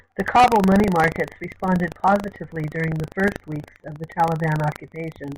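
Buffer tearing runs throughout the speech, heard as a steady robotic rattle at 25 Hz that sounds only while there is signal. The writing side and the reading side of a ring buffer have drifted, so they cross once in every 40 ms period. A small slice of each buffer, a few percent, still holds audio from about 70 ms earlier, and its hard joins at both ends produce the buzz.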